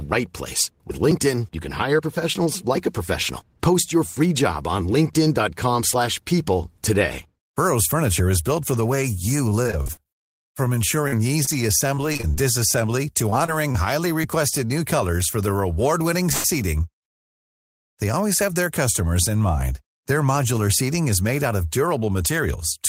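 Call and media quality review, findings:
Repeated packet loss (robotic sound), 9.49–12.36 s, right after "for the way you": choppy, 19 short holes patched by stretching the last sound, longest 43 ms, about 13% of that span. Again at 13.30–14.26 s after "disassembly to", 4 holes, longest 25 ms. Network loss, with concealment filling in.

Call audio freeze, 16.32–16.46 s, just before "they always have their": a 0.12 s hold of the last sound, then playback resumes with nothing dropped. Second one at 17.04–17.99 s, about 0.93 s, almost all of it silence. Likely delayed packets draining the jitter buffer.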